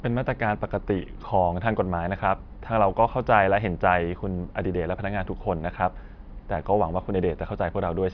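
Nothing technically wrong turns up anywhere in this bit of speech; it's a fault-free recording as far as listening goes.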